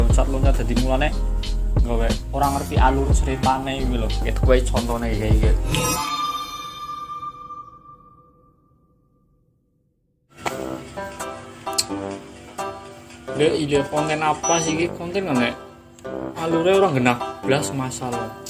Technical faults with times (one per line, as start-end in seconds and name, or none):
none